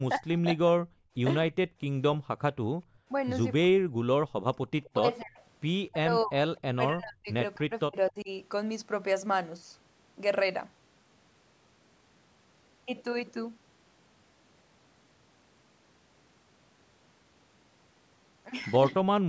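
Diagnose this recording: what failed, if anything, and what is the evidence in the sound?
Speech suppressed in double talk, at 0.09–0.91 s, 3.63–3.83 s, 4.99–8.29 s and 19.02–19.07 s, is a call-processing fault. The talker dips by up to about 30 dB, worst in the long stretch, likely because the echo canceller could not separate near speech from loudspeaker echo.

Background gated by the echo canceller, at 1.67–2.28 s and 2.85–3.08 s, is another call-processing fault. The room sound drops by about 20 dB and 21 dB while the loudspeaker plays, then returns once the canceller releases its hold on the microphone.

Echo leak, at 4.85–5.24 s and 6.57–6.61 s, shows up as a faint copy of the voice 256 ms behind, roughly 25 dB and then 35 dB below the speech. It is likely residual loudspeaker pickup that the loudspeaker side's echo canceller failed to remove and sent back.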